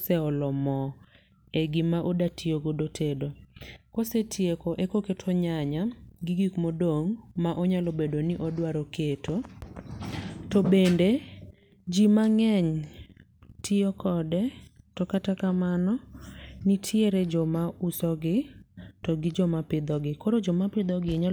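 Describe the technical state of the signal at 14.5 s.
At 14.5 s the speech signal is intact, with no dropout, distortion, glitch or other fault.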